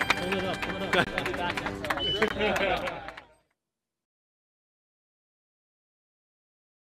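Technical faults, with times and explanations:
1.05–1.07 s and 2.28–2.30 s, block of digital silence: twice, the sound drops abruptly to silence for about 21 ms and then returns just as suddenly. This is heard as a short hole with abrupt edges, because neither edge is faded. The length fits a 1024-sample output buffer that was not filled in time. On a waveform each event is a near-flat line between hard cuts. A spectrogram shows a narrow blank column with thin broadband streaks at both edges.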